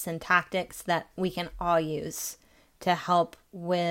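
No technical faults can be heard anywhere in the recording.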